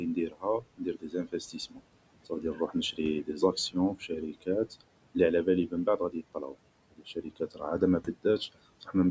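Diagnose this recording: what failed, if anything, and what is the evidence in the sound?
The call processing's noise suppressor is over-aggressive, producing noise suppressor artifacts through the whole clip. It pulls the room noise down by about 21 dB in the gaps and lets it return under the speech, so the background pumps with the voice.

The same stage is also cutting speech: it mistakes quiet parts of the voice for noise and drops them by about 19 to 21 dB. This happens from 0.0 to 1.84 s (around a second in total), 2.26 to 4.82 s (roughly 0.7 s), 5.15 to 6.55 s (about 0.3 s) and 6.91 to 8.95 s (roughly 0.7 s), where soft consonants and endings sound swallowed.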